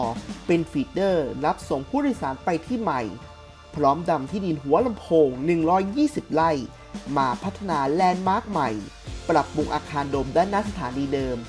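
Nothing technically wrong can be heard anywhere in the audio. The sound carries on steadily and without interruption, with nothing added to it or taken away.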